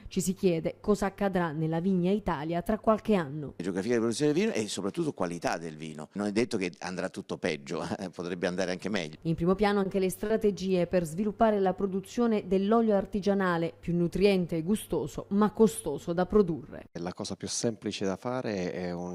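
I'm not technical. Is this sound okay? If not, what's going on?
No. Between 9.83 and 10.00 seconds, and again between 10.26 and 10.32 seconds, there is a short stall from a late packet. Each time, a piece of the audio arrived late, so the playback ran out of material and held the last bit of sound until the rest showed up. The hold lasts about 20 ms the first time and about 40 ms the second. Nothing is lost, but the sound briefly hangs or catches.

From 11.42 to 12.24 seconds there is a jitter buffer slow-down. The playback system was rebuilding its reserve, so it repeated tiny slices of the sound many times in a row. The pitch stays the same, but that stretch plays at about 94% of normal speed, adding roughly 56 ms. It sounds slightly drawn out.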